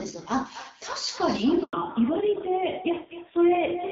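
Across the whole clip each phrase is followed by a quieter, thinner copy arriving roughly a third of a second later, at about 13 dB below the direct speech. This is echo with no canceller: the far end is playing the call through a loudspeaker, its microphone picks that sound back up, and nothing subtracts it before it returns over the network. The delay of around 300 ms is the round trip, long enough to hear the copy as a separate shadow rather than as room colour.

From 1.63 to 1.73 s the speech drops out for 100 ms. This is a handover gap: the call was being passed from one network to another and no speech frames arrived during the switch. The sound fades within a few tens of milliseconds and stays silent until the new link starts delivering audio, so whatever was said in that tenth of a second is gone.

From 1.73 s to the end the speech turns duller. This is a fallback to narrowband. 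Before the handover the call ran on the AMR wideband (HD Voice) codec at 12.65 kbit/s, where only light coding damage is audible. After it, the call continues on AMR narrowband at 5.9 kbit/s, so nothing above 4 kHz survives. Sibilants and breath lose their crispness, and the low bitrate adds a rougher texture to the speech.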